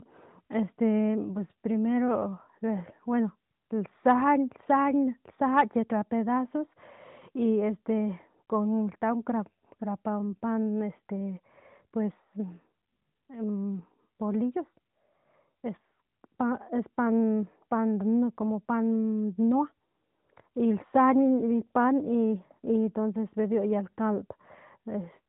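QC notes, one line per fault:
No faults found in this clip.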